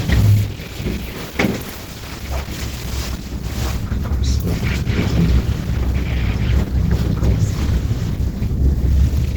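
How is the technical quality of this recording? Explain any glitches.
Technical quality is held back by one fault that runs through the whole recording.

Opus compression, throughout: The sound is plainly damaged in the way a low-rate Opus encoder in its hybrid mode leaves it, likely from a stream near 16 kbps. With so few bits, fine detail is replaced by filled-in noise, so tones come out grainy and rough and the texture turns hoarse and muffled. Bandwidth stays full, with content reaching about 20.2 kHz.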